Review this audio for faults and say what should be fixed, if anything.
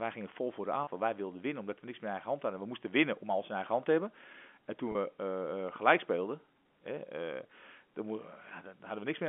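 A brief held, buzzy note at 0.84 to 0.87 s and again at 4.92 to 4.95 s: packet loss with pitch repetition, each 30 ms gap bridged by repeating the last pitch period. Adding jitter buffering and forward error correction on the network path would prevent it.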